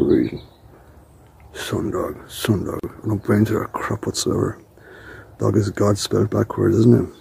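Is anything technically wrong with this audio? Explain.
Yes. A gap at a join of encoded pieces opens from 2.80 to 2.84 s, lasting 40 ms. Separately encoded segments were spliced with encoder delay and final-frame padding left in, so the sound briefly drops out, then resumes where it stopped. The waveform shows a narrow notch with smeared edges; the spectrogram shows a thin vertical strip of missing energy.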